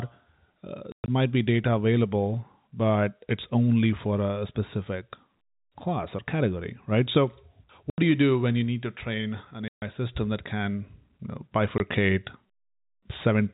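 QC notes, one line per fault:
0.92–1.08 s, 7.90–7.98 s, 9.68–9.82 s, 11.78–11.80 s, packet loss filled with silence: the receiver played silence in place of lost packets, punching hard-edged holes into the speech. The gaps run 140 ms (scattered over 160 ms, longest 120 ms), 80 ms, 140 ms and 20 ms. All are multiples of 20 ms, which fits 20 ms packets. The narrow telephone band, with nothing above 4 kHz, is audible in the speech around each dropout.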